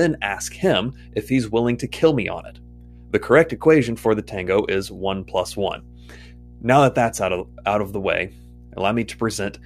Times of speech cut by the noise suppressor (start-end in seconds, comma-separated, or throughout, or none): none